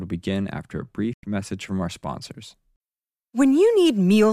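At 1.13 s, digital broadcast dropout mutes the speech until 1.24 s. Failed frames silence the receiver, leaving flat waveform and a blank spectrogram gap.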